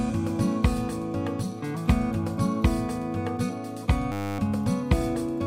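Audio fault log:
4.12–4.39 s, system hang loop: for about 0.27 s the audio locks into a steady buzz at 100 Hz, because the system stalled while the sound hardware kept replaying the same 10 ms stretch of its ring buffer, 27 times in a row. A loop that short repeats too quickly to register as separate stutters, so the ear hears a pitched drone at the loop rate. Little or no audio appears to be lost around the loop.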